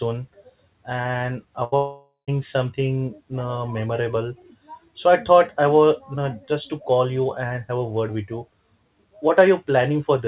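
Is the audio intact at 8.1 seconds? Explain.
Yes, the audio at 8.1 seconds is intact, with the speech carried through the WebRTC call path and nothing heard above 4 kHz, which fits a narrowband telephone codec such as G.711.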